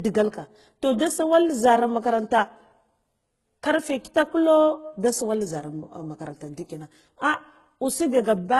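Right from the start and all the way through, the speech has a layered, smeary coded quality, most likely from transcoding between lossy codecs. The sound points to a very low-rate HE-AAC pass at around 12 kbit/s, then a re-encode with Opus at something like 32 kbit/s. The second encoder spends its bits reproducing the first one's damage and adds its own, so you hear both sets of artefacts at once. Nothing comes through above 19.9 kHz.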